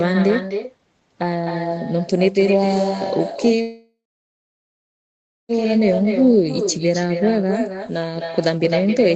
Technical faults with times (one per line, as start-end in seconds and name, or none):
0.00-9.16 echo with no canceller
3.61-5.51 call audio freeze
6.05-6.33 jitter buffer slow-down